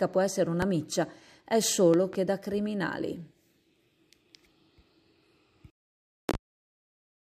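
Loud pops strike at 0.62–0.66 s, as a double at 1.94–2.17 s, and as another pair at 6.29–6.37 s. These are sharp thumps well above the sound, likely from voltage glitches, each showing as a tall waveform spike and a full-height vertical spectrogram stripe.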